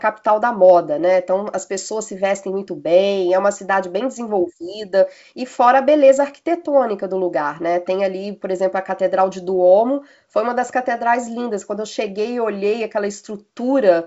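Nothing stood out on listening to this speech clip, which comes across as G.722 wideband telephone audio at 64 kbit/s with its content stopping around 7.7 kHz.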